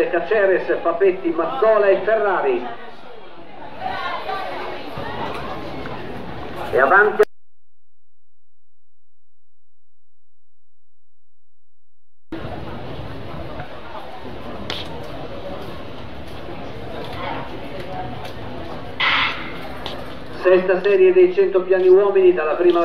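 From start to finish the waveform sits off-centre, a DC offset of about -31 dBFS. A constant shift like that isn't audible in itself, but it eats into headroom and shows up as a steady spike at 0 Hz in the spectrum.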